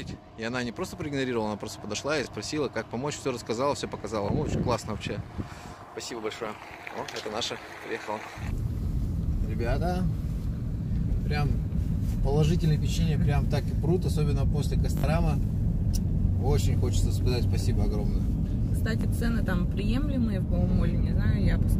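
Wireless packets dropped out four times, a Bluetooth stutter. The receiver replays its last 20 ms slice as a brief buzz at 2.24–2.27, 4.26–4.29 and 19.01–19.03 s, and a longer machine-gun burst of about 61 ms at 14.97–15.04 s, consistent with three consecutive packets lost. The audio then resumes slightly ahead.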